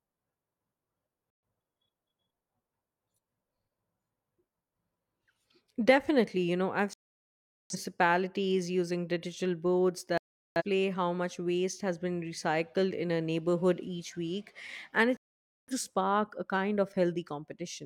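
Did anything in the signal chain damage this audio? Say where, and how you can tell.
Yes, there's a digital broadcast dropout at the reception stage. The speech mutes at 1.30–1.43, 6.93–7.75, 10.18–10.62 and 15.17–15.73 s, then resumes further on with nothing recovered. The receiver lost the signal or rejected bad frames and stayed silent until clean ones arrived.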